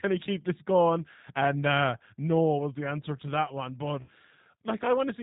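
Speech that has passed through the G.729 codec at 8 kbit/s the whole way through. It sounds plainly rough and slightly synthetic, because each 10 ms frame is rebuilt from a vocal tract filter, a pitch predictor and a handful of pulses rather than the original waveform. On a spectrogram nothing appears above 4 kHz, leaving a flat empty band across the top, and the harmonics look smeared and grainy instead of cleanly striated. Between 4.02 and 4.12 s there is VoIP packet loss concealed by the speech codec. About 60 ms of audio is missing, which points to a couple of lost packets. The decoder fills the gap by repeating its last pitch and filter at falling gain, so the sound turns into a short buzzy tone or coloured noise that fades. Because each frame builds on the one before, it stays weak or distorted for a moment after the loss ends. In the waveform this shows as a shrinking stretch and a dip in level. 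On the spectrogram it appears as a flat, unchanging pattern that fades out.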